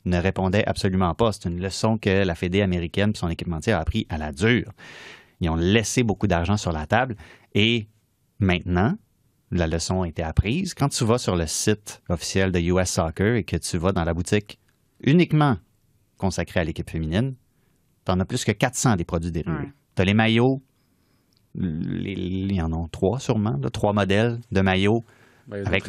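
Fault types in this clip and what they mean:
No technical faults detected in this speech recording.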